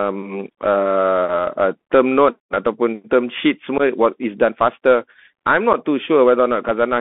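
From start to finish the speech carries the narrowband sound of a Bluetooth CVSD headset codec. The line runs from about 200 Hz to 3.5 kHz, so everything above is gone. The one-bit delta coding, at a rate that fits a 64 kbps link, leaves a grainy hiss under the speech, turns s sounds scratchy, and smears loud bright peaks when its adapting step can't keep up. A plain telephone band-limit would sound dull but clean, without that grain.

From 3.78 to 3.81 s, between "note ataupun term sheet" and "is done faster", there is unconcealed Bluetooth headset packet loss. About 15 ms of audio, a couple of packets, drops out and is replaced by silence or an idle pattern, leaving a hole with hard, abrupt edges. The speech resumes quieter for a moment while the codec's step size rebuilds. A second, shorter gap of 7.5 ms, a single packet, occurs at 5.73 s. Because nothing is concealed, these are abrupt holes rather than the warbly repeats of concealed loss.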